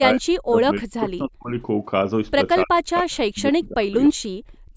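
Speech recorded through a call path, with the band ending at 8 kHz as the call microphone processing limits it. The talker is repeatedly pulled down in a pattern consistent with speech suppressed in double talk, at 0.0 to 0.24 s, 0.42 to 1.51 s, 2.64 to 3.92 s and 4.09 to 4.22 s. The first dip reaches about 30 dB and the later ones about 40 dB, so the voice sinks in level. The likely cause is an echo canceller that, with both ends talking at once, could not tell the local talker from loudspeaker echo and attenuated everything. Near the end, two brief echo leaks appear at 4.05 to 4.09 s and 4.53 to 4.57 s. These are short delayed copies of the voice arriving 295 ms late, the first about 25 dB below the speech and the second about 40 dB below. They are likely residual loudspeaker pickup that the far end's echo canceller failed to remove and sent back down the line.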